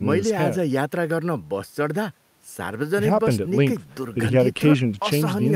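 No technical faults in this speech.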